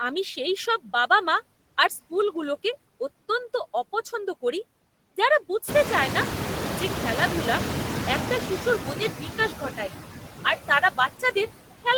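From the start the background pumps: it sinks in the gaps between phrases and swells back under the talker. These are noise suppressor artifacts. The processor is pulling down every band it judges to be steady noise, by about 14 dB, and it decides frame by frame.

Around 5.5 s the room noise jumps by about 18 dB and then sits about 7 dB under the speech. From 5.67 s, just after "অত্যন্ত অপছন্দ করি যারা", it comes through louder. It then fades down over 2.79 s, until 8.46 s, just before "শিশুর মনের বিকাশ". This is the noise suppressor catching up. Its noise estimate trailed the sudden rise, so at first it cut only about 6 dB, then settled as the estimate adapted.

Between 9.49 and 9.9 s, right after "শিশুর মনের বিকাশ", bits of the speech sound swallowed and faint, with dips of up to about 11 dB across roughly a tenth of a second in total. The same happens from 10.68 to 11.49 s, with dips reaching about 12 dB over roughly 150 ms in total. 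This is speech cut by the noise suppressor. It mistook soft, low-level parts of the voice for background and turned them down along with the noise.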